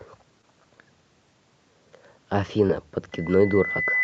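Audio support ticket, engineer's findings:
Loudspeaker feedback squeal from 3.12 s to clip end, single 2 kHz tone. Probable cause: mic picking up its own loudspeaker, loop gain above one. Swells over roughly a second to about speech level, unlike a steady hum or test tone. Audio band stops near 8 kHz via call codec.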